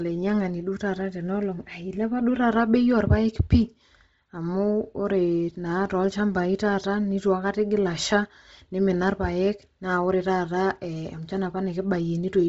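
Throughout the speech the band stops sharply near 7.7 kHz, and the upper range that remains sounds grainy and breathy, with hiss standing in for real detail. This is likely Bluetooth LC3 compression at a low rate, around 24 kbps with short 7.5 ms frames, zeroing much of the top band and filling it with noise. Unlike a plain low-pass filter, which leaves a clean, dull edge, this noise-filled band has a rough texture.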